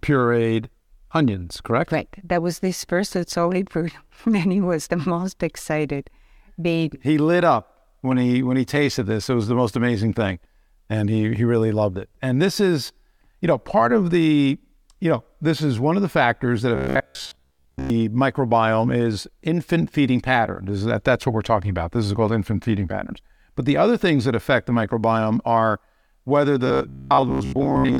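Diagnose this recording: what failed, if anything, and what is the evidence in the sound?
Robotic sound from repeated short buffers shows up twice: 16.76 to 17.90 s, after "of the factors that", and 26.67 to 27.99 s, after "the microbiome are whether". A rigid 66.7 Hz buzz fits a 15 ms chunk replayed at the driver or buffer stage, likely because fresh audio arrived too slowly, so most real sound gets skipped.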